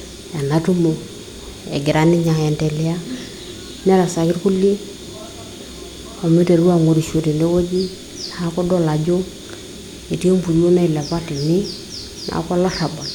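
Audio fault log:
No faults are audible anywhere in the speech.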